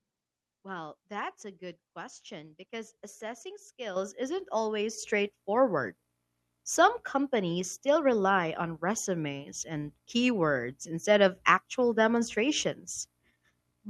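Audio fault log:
3.96 s and 4.98 s: microphone volume stepped up, first by about 9 dB after "good question because assessing", then about 5 dB after "isn't always"; input gain was raised abruptly, so voice and background jump together, visible as sudden step increases in waveform envelope.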